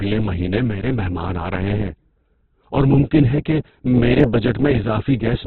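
Throughout, the speech is grainy and rough, with nothing above 4.2 kHz. This points to heavy Opus compression, likely at a very low bitrate around 8 kbps.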